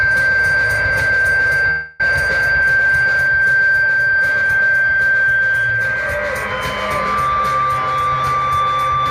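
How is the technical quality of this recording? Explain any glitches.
The recording has three glitches: a brief break in the sound followed by two short stretches that run fast.

From 1.70 to 2.01 s there is what sounds like a long network dropout, likely caused by packets failing to arrive. The receiver covered the gap by continuing the last sound as a fading buzz or hiss for about 0.29 s, with no true silence. About 0.2 s of audio was never played, so the sound resumes with that piece missing.

From 2.53 to 2.79 s and again from 3.98 to 4.43 s, a jitter buffer speed-up occurs. The buffer had built up excess delay. The receiver drained it by cutting out tiny pitch-period slices. About 40 ms and 70 ms were removed, so the audio plays at 112% and 111% speed at unchanged pitch and sounds briefly hurried.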